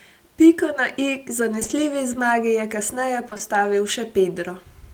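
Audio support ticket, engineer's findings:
Short concealed packet loss at 1.59, 1.63 and 1.67 s, then 3.29, 3.33 and 3.37 s; two runs of about 0.12 s. Brief smear and wobble in the speech. Receiver jitter buffer/decoder concealment extrapolated the last sound across each 20 ms gap, then blended back.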